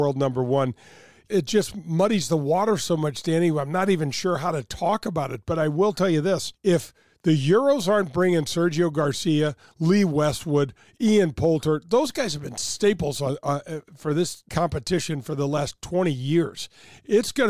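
No technical faults detected.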